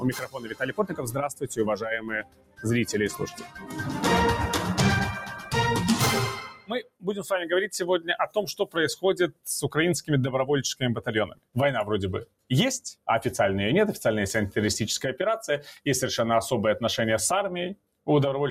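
A speech-tuned noise suppressor was left running across the whole clip, treating steady tones, ambience and decays as noise. Its gain moves by around 10 dB as material comes and goes, so sustained parts sink while attacks pass, leaving a pumping, fluttering, thinned sound.

At several points the noise suppressor turned the sound down further, pulling held and fading material well below the rest. This happens at 0.0–2.65 s, 3.3–3.82 s, 5.15–5.54 s, 6.3–7.25 s, 7.99–10.1 s, 11.26–11.56 s, 12.25–13.08 s and 17.75–18.08 s. The drops reach about 19 dB at the deepest, though only about 12 dB at 3.3 s and about 9 dB at 5.15 s, so sustains and tails collapse audibly.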